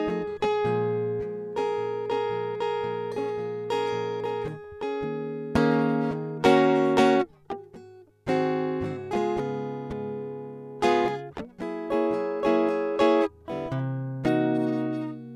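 The music comes through with no audible technical fault at any point, and the signal holds steady throughout.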